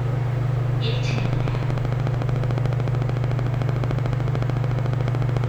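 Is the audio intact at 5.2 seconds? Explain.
No. At 5.2 seconds the sound sits inside a train of clicks that runs from 1.11 s to 5.45 s. Sharp pulses of much the same shape arrive at a steady 13.6 per second, around seventy in all. They peak roughly 10 dB above the sound itself. The likely cause is interference from nearby equipment or a faulty connection or power supply injecting repeated spikes. The result is an even ticking that stays audible in pauses too.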